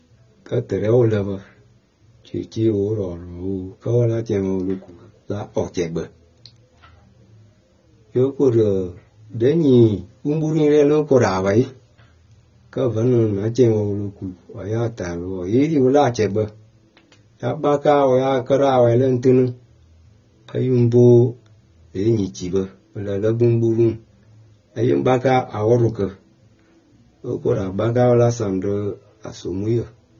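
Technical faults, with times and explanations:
Throughout, AAC compression: a likely low-bitrate AAC-LC encode, fitting about 24 kbps, removes everything above 6.9 kHz, leaving the speech dull, smeared and audibly warbly.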